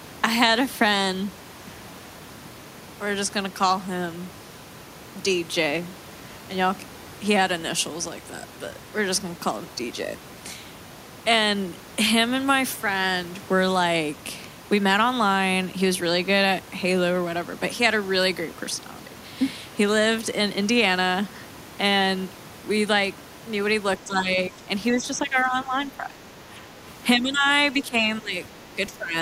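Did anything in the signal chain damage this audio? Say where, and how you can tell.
Yes. In call processing, the echo canceller likely mistook double talk for echo, so the speech is suppressed in double talk, dipping about 10 to 15 dB at 24.0–24.69, 24.92–26.84, 27.18–27.47, 27.79–28.34 and 28.92–29.15 s.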